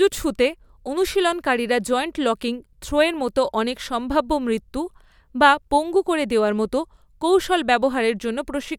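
No technical faults are audible.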